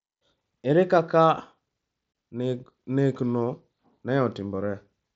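At 2.13 s the speech drops out for about 22 ms, a short hole with hard edges that snap in and out rather than fading. This is unconcealed Bluetooth headset packet loss: a few consecutive voice packets between headset and phone never arrived, which fits roughly three frames going missing, and nothing was done to fill the gap, so silence or an idle pattern sits in their place. The audio is carried over the mSBC headset link, which adds a light grain on louder passages.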